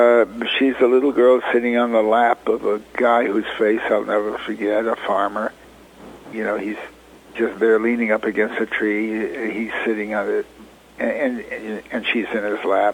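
No technical faults can be heard anywhere in this recording.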